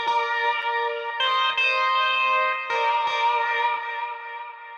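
At 0.62 s a block of digital silence, about 3.6 ms long, drops in. The signal cuts out and back with no fade, and a gap this short is heard as a tick or dip rather than as silence.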